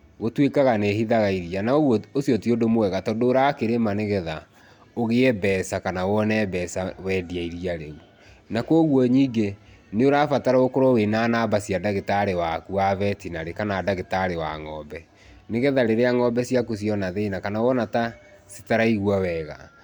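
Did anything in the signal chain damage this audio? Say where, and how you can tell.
No, nothing in this recording stood out on listening as damage from any stage of the signal chain.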